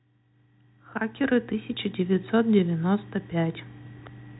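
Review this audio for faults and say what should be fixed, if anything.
Nothing here needs fixing.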